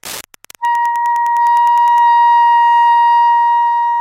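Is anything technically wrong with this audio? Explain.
Yes. Wi-Fi interference runs from 0.0 to 2.0 s: a nearby Wi-Fi radio's beacon, repeating every 102.4 ms, is rectified by the audio circuitry and heard as a steady ticking about ten times a second, sitting roughly 25 dB below the sound.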